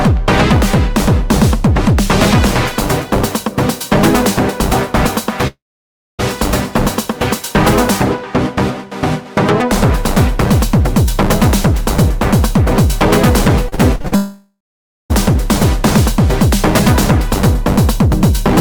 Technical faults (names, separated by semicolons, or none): long network dropout; repeated packet loss (robotic sound)